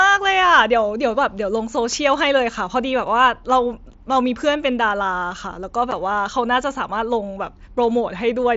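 At 5.91 s, unconcealed Bluetooth headset packet loss cuts a 7.5 ms hole, fitting one lost packet. It shows as a flat waveform notch and a thin spectrogram stripe.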